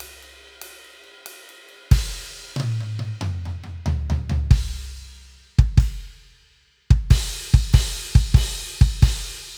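From about 0.48 s to 9.48 s the music carries a regular click roughly every 1.29 s, around seven in all. These sound like clock drift buffer slips, likely from two devices whose clocks disagree by something like 150 ppm, dropping or repeating a few samples each time.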